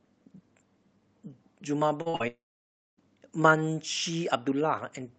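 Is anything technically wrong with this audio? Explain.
Yes. There are two kinds of network fault, clustered around two seconds into the speech. They come through a call path whose top end stops near 8 kHz, which fits Opus at a moderate bitrate.

Short concealed packet loss occurs three times in quick succession: 2.01–2.08 s, 2.10–2.16 s and 2.16–2.22 s. Each gap is about 40 ms of audio that never reached the decoder in time. The receiver bridged each hole by extending the preceding sound, pitched where it was voiced and noise-like where it was not, then crossfaded back. Each one is heard as a brief smear or wobble, and a short consonant there can be lost.

Immediately after, from 2.28 to 2.99 s, there is a long network dropout of roughly 0.7 s. The lost stretch begins with a brief fading continuation of the last sound, and the remaining 0.6 s or so goes silent. The cause is likely a burst of lost packets too long to conceal. 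The concealment gives up, and the speech resumes later with the missing portion simply absent.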